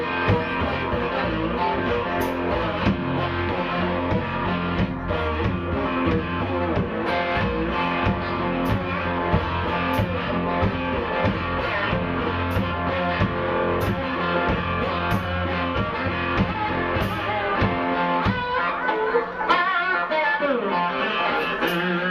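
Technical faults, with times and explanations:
No technical faults, with times and explanations, to list here.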